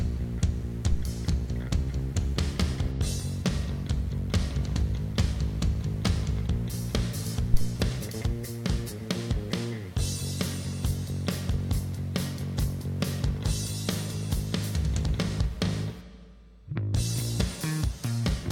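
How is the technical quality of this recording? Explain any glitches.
The recording has two low-frequency glitches. Both are phantom power thumps, at 0.92–1.09 s and 7.54–7.73 s: a supply switched on or off on a live input pushes a voltage step through the coupling capacitors, heard as deep thumps peaking at about -18 dBFS and about -8 dBFS and decaying within roughly 40 ms.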